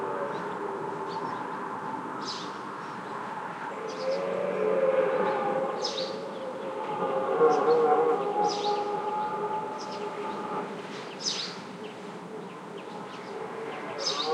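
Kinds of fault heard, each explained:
Nothing here stands out as a technical problem; the sound comes across without any faults worth flagging.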